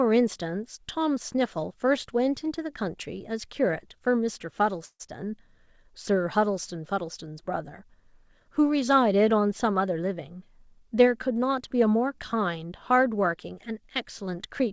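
A call audio freeze runs from 4.85 to 5.02 s. The speech stops moving forward and the last sound is held as a fading buzz or hiss, ending in about 60 ms of silence. The likely cause is packets stalling in transit and the jitter buffer running empty. When the stream resumes it picks up where it left off, so the 141 ms pause is inserted, nothing is lost, and the delay grows by that amount.

A jitter buffer speed-up follows from 10.01 to 11.58 s. With too much audio queued, the receiver repeatedly cuts out short pitch-period slices, trimming roughly 150 ms in total. The speech plays at 108% of normal speed with its pitch unchanged, so this stretch sounds hurried. Throughout, the G.722 call path at 64 kbps leaves nothing above 8 kHz.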